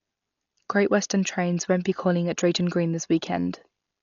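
Dolby Digital compression, likely, throughout: a bitrate pointing to about 40 kbps leaves nothing above 6.9 kHz and fills starved bands with dither, giving dull, rough, fluttering speech.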